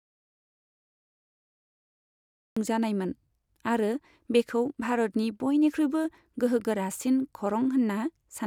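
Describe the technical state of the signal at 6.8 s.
At 6.8 s the speech signal is intact, with no audible fault at that moment.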